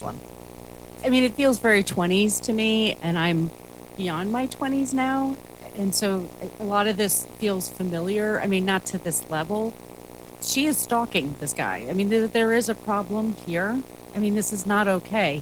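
A video or display buzz runs through the whole clip. A screen or video cable is leaking into the audio path. The buzz sits at 60 Hz, the picture's field rate, with a gritty hash stacked above it. It is loud, only about 15 dB below the speech. It stays present in pauses and under every phrase.

Opus voice compression also affects the entire clip, and the damage is plainly audible. The coder is in hybrid mode. The speech band below 8 kHz goes through linear-prediction coding. A separate layer covers the top. The band stays full, reaching about 20 kHz. But the excitation is coded coarsely, which fits a low rate near 16 kbps. The speech comes out with obvious coding grit, working in 20 ms frames.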